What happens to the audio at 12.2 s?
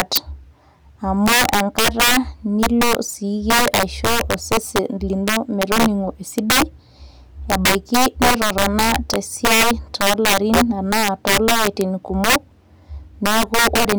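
Integer overflow at 12.2 s, as throughout the speech: peaks driven about 9 dB too hot wrap to the opposite sign, producing violent cracks on a few percent of samples.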